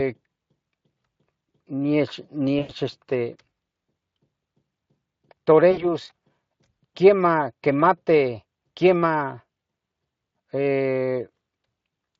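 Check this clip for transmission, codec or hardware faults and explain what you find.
Two brief dropouts break up the speech, both VoIP packet loss concealed by the speech codec. At 2.59 to 2.73 s, about 100 ms of audio is missing, and at 5.71 to 5.87 s about 60 ms. Each gap sounds like the voice smearing into a buzzy tone or coloured noise that fades, then coming back weak and rough for a moment. The Speex decoder, which elsewhere does only light damage, fills each gap by repeating its last pitch and filter at falling gain. Because each frame builds on the one before, the speech takes a short while to recover after audio resumes.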